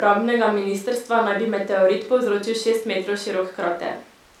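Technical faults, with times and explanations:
No technical faults found anywhere in the speech.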